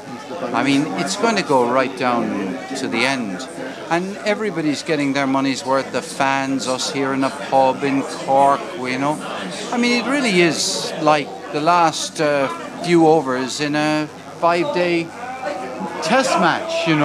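Sharp switching spikes from a dimmer, rectifier or unshielded path leak into the signal twice per 50 Hz mains cycle, causing mains buzz throughout the clip. Harmonics stacked up to several kilohertz make a steady, raspy buzz about 30 dB below the sound.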